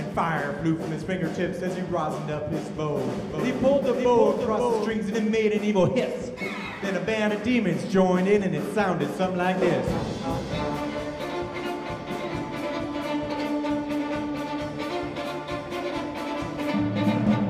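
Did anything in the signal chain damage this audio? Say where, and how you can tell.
Yes. Between 3.30 and 4.92 s there is a doubled audio track, most likely from the signal being captured a second time through a slower routing path or an edit that left two out-of-step copies layered together. A full-band duplicate trails the original by about half a second, roughly 5 dB quieter, with no decay or room colour of its own. It switches on and off abruptly at those times, which rules out a natural echo.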